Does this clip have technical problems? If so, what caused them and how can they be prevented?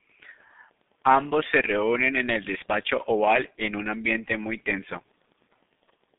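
Yes. The speech has been through a G.723.1 codec from start to end. Nothing is heard above about 3.8 kHz, and the low end thins below about 150 Hz. That gives a narrow, muffled telephone band. The codec models the voice in long 30 ms frames and updates it slowly. So consonants smear together and the voice turns hoarse. The heavy damage fits a bitrate around 6 kbit/s. To prevent it, carry the call over a wideband codec at a higher bitrate.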